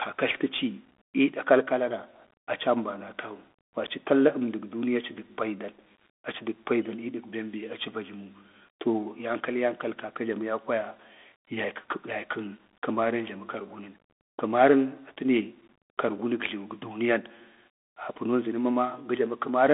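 All the way through, the speech runs through a Bluetooth CVSD headset codec. It's squeezed to roughly 250 Hz to 3.5 kHz, with nothing above 3.7 kHz, which fits a 64 kb/s one-bit stream. The step-tracking damage is plainly audible, with a gritty, granular edge.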